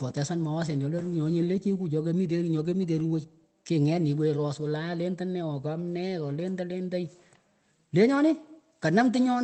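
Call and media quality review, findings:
No audible faults found.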